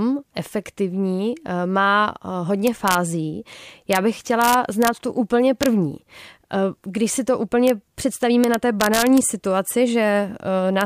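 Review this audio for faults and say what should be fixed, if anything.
Integer overflow causes violent cracks at 2.67–2.95, 3.93–3.96, 4.42–4.88, 5.63–5.66, 7.68–7.70, 8.44–9.18 and 10.81 s. Loud peaks wrap to the opposite sign instead of limiting. Use saturating arithmetic or headroom before gain stages.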